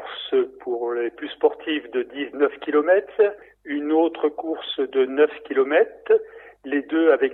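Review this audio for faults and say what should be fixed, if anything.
Nothing stood out on listening, so there is nothing here that needs fixing.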